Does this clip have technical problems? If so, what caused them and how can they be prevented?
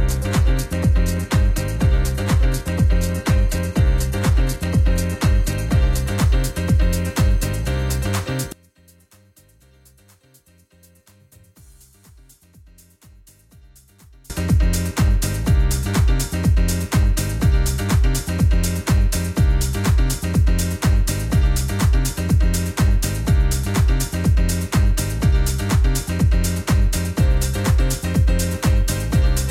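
Yes. From 0 to 6.0 s the top end is thin and smeary, with nothing above 14.9 kHz, then clarity jumps up without a gap. That's an adaptive stream starting at a low bitrate, consistent with an HE-AAC start near 20 kbit/s before stepping up to AAC-LC at 96 kbit/s. Starting on a higher rung or prebuffering at full quality avoids it.

Between 8.52 and 14.30 s the sound collapses by about 31 dB into a faint residue, the cancellation you get when one channel is inverted and the pair is summed to mono, likely a polarity flip in one leg of the stereo path. A phase-correlation check before the mono fold-down catches this.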